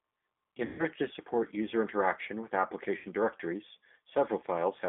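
The whole recording has passed through the G.729 codec at 8 kbit/s, which fits the G.729A variant. The speech is rebuilt from a vocal-tract filter, a pitch predictor and a few pulses per frame, so it sounds rough and faintly synthetic. On a spectrogram nothing extends above about 3.5 kHz, and little remains below 250 Hz, leaving a narrow telephone band. Harmonics look smeared instead of cleanly striated.

From 0.65 to 0.86 s, just before "to support user interaction", there is VoIP packet loss concealed by the speech codec. About 140 ms of audio is missing, which fits seven 20 ms packets. The decoder repeats its last pitch and filter with falling gain, so the speech stretches into a buzzy tone or coloured noise that fades. On the waveform, a decaying periodic pattern replaces normal syllable envelopes, and the spectrogram shows flat, frozen harmonics. A second, shorter gap of about 80 ms runs from 2.97 to 3.07 s, right after "support user interaction with". 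It fits four lost packets, and the same stretched, fading sound follows, with weak, distorted output lingering briefly as the decoder recovers.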